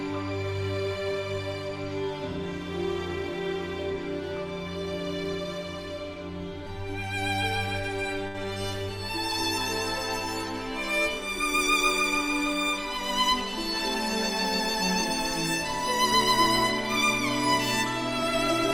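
At 8.27 s a short stall from a late packet holds the sound for about 71 ms, nothing lost; spectrogram shows frozen, smeared harmonics, waveform a repeated periodic stretch.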